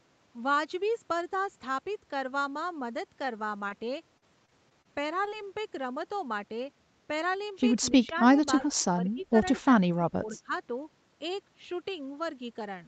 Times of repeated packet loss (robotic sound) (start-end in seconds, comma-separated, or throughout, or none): 3.25-5.45